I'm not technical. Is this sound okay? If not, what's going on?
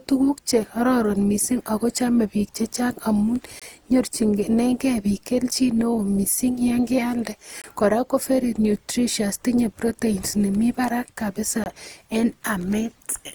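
No, it isn't. There are two separate problems.

Throughout the speech there is generation loss. The voice sounds swirly, hollow and smeared, and the starts of sounds lose their crispness. The likely cause is that the recording was compressed and decompressed again and again, around seven times, with the same kind of audio compression. Each round throws away a little more detail in a slightly different place, so the damage builds up to more than a single pass would cause.

There is also a gap between chunks, which you hear as three tiny, abrupt dropouts at 3.60–3.62 s, 7.62–7.64 s and 11.64–11.66 s. Each one lasts about 21 milliseconds and they come every 4 seconds. This pattern points to the audio being handled in 4-second pieces with a sliver of silence inserted at each join. Nothing is missing, but the sound briefly cuts out at every boundary.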